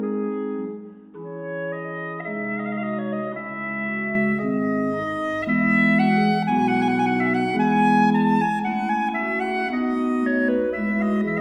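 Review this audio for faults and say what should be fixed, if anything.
From 0 to 4.15 s the sound is dull and boxy, with nothing above 3.8 kHz, a few decibels quieter and carrying a faint noise floor of its own. It then clears abruptly with no gap, most likely because the input switched to a poorer device. Unlike a plain low-pass filter, the level and background noise change too. Lock the recording input to the intended microphone and stop headsets from claiming the call profile during capture.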